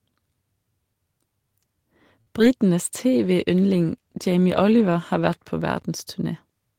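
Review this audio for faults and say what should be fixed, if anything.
At 2.21 to 2.29 s a sound is held unnaturally long with a faint buzz. This is a short stall from a late packet: the jitter buffer ran dry, and the receiver stretched the last sound for about 53 ms, leaving the delay 53 ms longer. A slightly deeper jitter buffer would absorb this.

A brief smear at 2.39 to 2.42 s is short concealed packet loss. About 20 ms of audio never arrived in time, and the decoder papered over the gap by extending the preceding sound before blending back. Forward error correction in Opus would help recover lost frames.

From 2.93 to 5.6 s the speech turns rougher and duller. This is a call bitrate drop from 32 to 16 kbps, bottoming out for 2.57 s, which forces coarser coding and a narrower band. Better bandwidth estimation and a higher minimum bitrate would limit this.

An irregular burst of scratchy crackle at 5.74 to 5.82 s is loose connector crackle: a worn or dirty contact intermittently breaking the signal as it moved. 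Cleaning or replacing that connector and securing the cable would prevent it.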